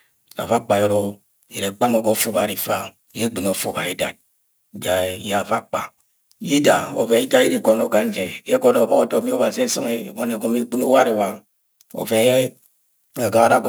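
Throughout, crude rate conversion, likely 48 kHz to 44.1 kHz, adds an inharmonic fizz on louder speech, roughly 25 dB down, showing as stray spectrogram lines mirroring the harmonics.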